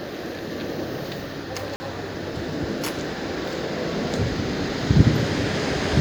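At 1.76 s the audio drops to a block of digital silence lasting 40 ms, ending at 1.8 s, where samples were zeroed, likely from an output buffer not filled in time. The sound cuts out and back with no fade; a waveform shows a flat line, a spectrogram a blank vertical gap.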